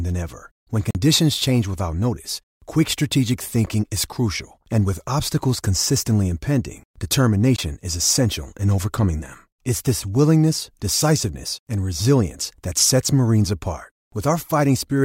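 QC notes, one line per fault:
0.91–0.95 s, 3.66 s and 7.56–7.58 s: block of digital silence. A short hole of about 43 ms, then a sharp tick of about 11 ms, then a brief dropout of about 21 ms. Each gap starts and ends abruptly because the audio cuts to silence and back with no fade. The lengths fit 2048-, 512- and 1024-sample output buffers that were not filled in time.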